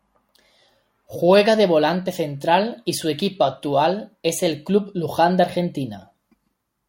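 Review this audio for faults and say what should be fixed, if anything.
Nothing here needs fixing, since no technical faults turn up anywhere in this bit of speech.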